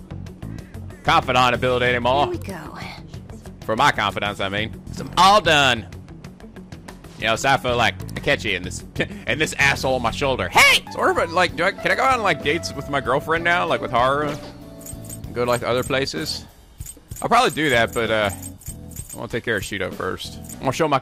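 No technical faults are audible.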